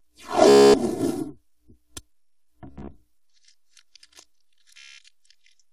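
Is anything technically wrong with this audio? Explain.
Yes, there are two faults.

Channel delay (comb filtering) runs through the whole clip. The audio sounds hollow and phasey, with a colour that never changes. One channel arrives about 3 ms after the other, and when the two are summed to mono, the content they share cancels at evenly spaced frequencies. The first notch falls somewhere around 150 Hz, and further notches repeat at regular intervals up the spectrum. Because the delay is constant, the notches stay fixed.

Bluetooth stutter occurs three times: at 0.49 to 0.74 s, at 2.67 to 2.91 s, and at 4.78 to 4.99 s. At each point the sound breaks into a rapid, machine-gun buzz. When packets are lost or arrive late, the receiver keeps replaying its last short slice until fresh data turns up. The first event covers about 247 ms of missing audio, which fits roughly 17 lost packets, and the third covers about 203 ms. 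The middle event is patchier, with about 145 ms lost in pieces across 232 ms and no single gap longer than 58 ms. After each stutter the sound picks up further along, as though it had kept playing during the gap.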